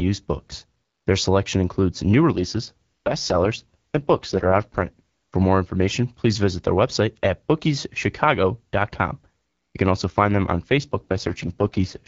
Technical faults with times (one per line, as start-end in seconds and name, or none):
2.31-5.34 AMR rate drop
10.76-12.07 AMR rate drop